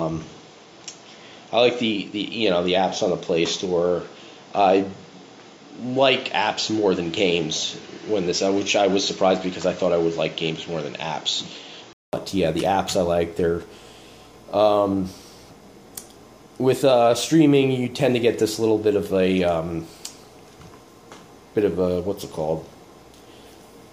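Input switched to a poorer device, most likely, from the start to 12.13 s: the sound is band-limited, with nothing above 7.6 kHz, and carries a faint background noise roughly 35 dB down. At 12.13 s there's a 200 ms silence, then fuller, brighter sound at a similar level.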